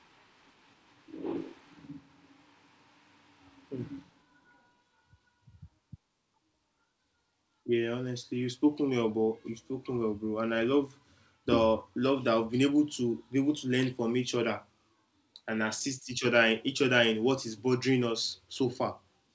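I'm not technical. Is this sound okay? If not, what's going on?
Yes, this speech came through a normal call connection with nothing gone wrong, and the only thing you might notice is the usual slightly muffled call sound, because the system carries nothing higher than about 8 kHz.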